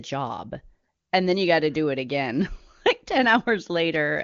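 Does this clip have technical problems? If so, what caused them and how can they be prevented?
No, there are no technical faults here; the speech runs through an AMR wideband (HD Voice) path whose content stops near 7.1 kHz, consistent with the top 23.85 kbit/s mode.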